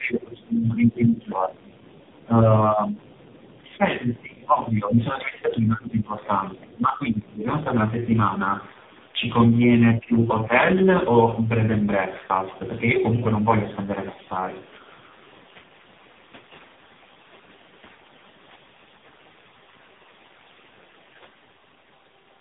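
Throughout the clip, tandem speech coding is audible. The call seems to have passed through three low-rate speech codecs in a row, each re-encoding the last one's output, with the final stage sounding like AMR-NB around 5.9 kbit/s. The speech is rough, muffled and warbly, with nothing above 3.8 kHz.

From 0.0 to 3.02 s, the speech is suppressed in double talk. The echo canceller likely mistook both sides talking at once for echo and turned the talker down by up to about 20 dB, so the speech sinks.

From 3.02 to 3.59 s, the other side's voice leaks through. Echo from the talker's loudspeaker was likely not fully cancelled, so a faint second voice, about 35 dB below the speech, slips into the microphone signal underneath.

The double-talk suppression returns from 3.39 to 4.98 s, overlapping the leak, with dips of up to about 20 dB. It comes again from 5.17 to 6.26 s, shallower at about 15 dB, and each time the talker's speech is pulled down.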